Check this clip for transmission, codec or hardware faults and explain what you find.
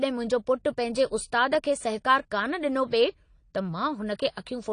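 AAC compression damage runs through the whole speech clip. Nothing sounds above about 9.9 kHz. Sibilants turn dull and fizzy, with a warbling smear. The likely cause is a low-rate AAC-LC encoder, which fits roughly 32 kbps, discarding high bands and coarsely quantising the rest.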